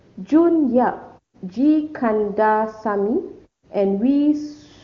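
Nothing in this speech recording stood out as a technical problem on listening.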